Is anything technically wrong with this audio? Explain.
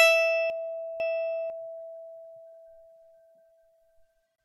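Yes. Between 0.5 and 1.5 s, two 500 ms chunks of the music are swapped, so the passage jumbles at the three hard joins at 0.5, 1.0 and 1.5 s. This is chunks out of order: one chunk arrived late and played after its successor. The waveform and spectrogram show abrupt discontinuities at each join.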